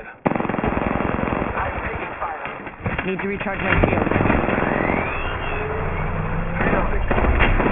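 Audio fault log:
throughout aliasing: resampling down to 6 kHz without an anti-alias filter folds content above 3 kHz back down, leaving gritty, metallic false tones fairly loud against the sound.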